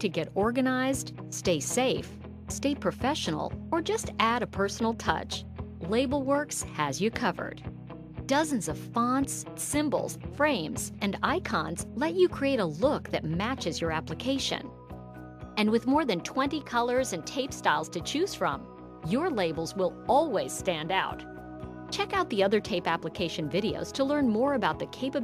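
No technical faults can be heard anywhere in the audio, and the signal holds steady throughout.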